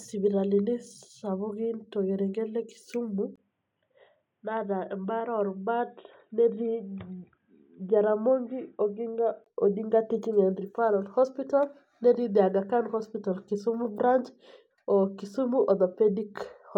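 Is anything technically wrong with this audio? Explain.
Yes. From 3.36 to 9.46 s the speech turns dull and boxy, with nothing above 3.8 kHz, a little quieter, over a faint new background noise, after a 20 ms gap. The input likely switched to a poorer device with a narrower band, switching back at 9.46 s.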